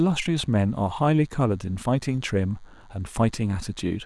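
A nearby DECT cordless phone buzz runs throughout: radio bursts every 10 ms are rectified in the audio circuit, leaving a faint, thin 100 Hz buzz well below the speech.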